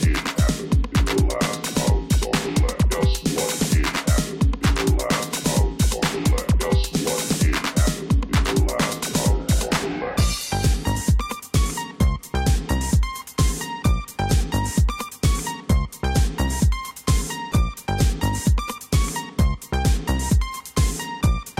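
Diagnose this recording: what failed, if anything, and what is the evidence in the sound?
Damaged data in a compressed stream, at the codec stage, causes a single blip at about 10.95 s. Corrupted bytes made the decoder misread a frame and resynchronise at the next header, giving a brief glitch of about 18 ms.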